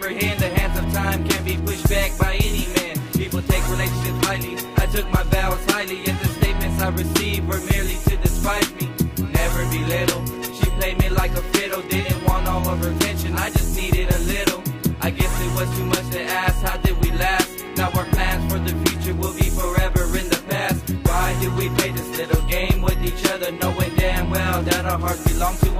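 From start to finish, a steady ticking runs under the sound about ten times a second, faint but regular, sitting roughly 35 dB below the programme. This is Wi-Fi interference: a nearby Wi-Fi radio transmits its beacon every 102.4 ms, and some part of the audio circuit rectifies those radio bursts, turning each one into a small audible click that repeats at the beacon rate for the whole clip.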